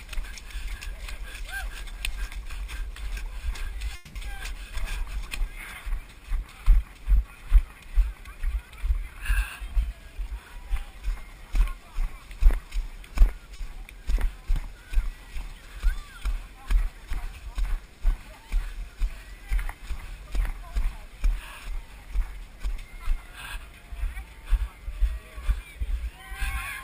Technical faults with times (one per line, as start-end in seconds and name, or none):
3.95-4.17 call audio freeze
4.23-4.26 skip ahead
4.37-7.49 jitter buffer slow-down
9.03-10.08 jitter buffer speed-up
13.56-13.61 short stall from a late packet
25.17-26.56 jitter buffer speed-up